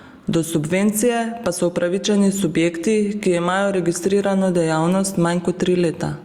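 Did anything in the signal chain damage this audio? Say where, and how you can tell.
Yes: gain pumping throughout, likely excessive input gain with a fast limiter; the gain swings by around 10 dB, squashing loud and soft parts closer in level.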